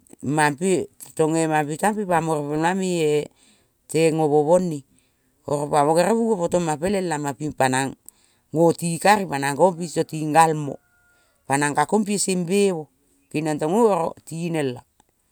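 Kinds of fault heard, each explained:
No technical faults can be heard in this recording.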